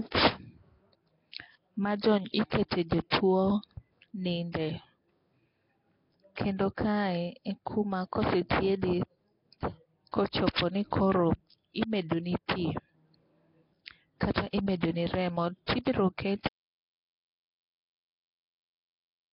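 Throughout, the speech has most likely passed through Nellymoser compression, the old Flash microphone codec, at a rate that fits about 22 kbps. The damage is heavy: nothing remains above 5.3 kHz, weak bands are filled with noise, and the voice carries a rough, hissy halo and a smeared, underwater quality.

At 2.51 s, and again from 4.52 to 4.54 s, the codec's block coding spreads quantisation noise ahead of a sharp attack, producing pre-echo: a brief hiss of 12 ms and then 25 ms just before the onset, leaving the attack soft and smeared.

From 16.48 s to the end, right after "imedoni remo tibiro", the audio input was likely lost while recording continued, an audio dropout to silence. The sound cuts off mid-flow into a dead-silent gap with no room tone, and whatever followed is gone.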